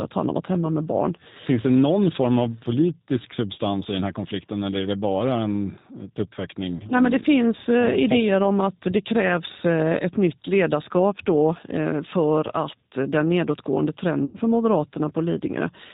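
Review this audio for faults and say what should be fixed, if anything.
G.729 codec damage runs through the whole speech clip. The 8 kbit/s coding cuts everything above 4 kHz and gives voiced sound a rough, slightly synthetic buzz. That grain sets it apart from simple low-pass filtering, which would only dull the sound. To prevent it, carry the call on a wideband codec such as G.722 or Opus at a higher bitrate.

VoIP packet loss concealed by the speech codec occurs at 6.77 to 6.84 s, about 30 ms lost, and at 14.25 to 14.37 s, about 90 ms lost, which fits three consecutive packets. The decoder stretches the last sound into a fading buzzy tone or coloured noise, and the voice stays weak briefly afterwards. To prevent it, improve network reliability and add forward error correction or a larger jitter buffer.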